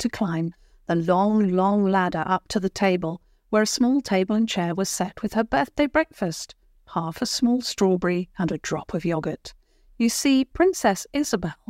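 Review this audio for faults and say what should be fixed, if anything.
No faults found; nothing here needs fixing.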